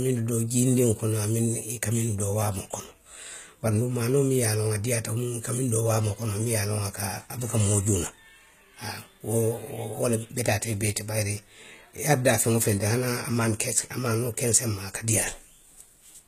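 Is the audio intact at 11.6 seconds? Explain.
No. At 11.6 s, as across the whole clip, the speech carries plainly audible HE-AAC compression damage: the treble is rebuilt from copied lower bands, so s sounds turn gritty and metallic. Unlike a plain low-pass, the top stays bright, ending near 14.9 kHz, which fits a low bitrate around 20 kbps and likely HE-AAC.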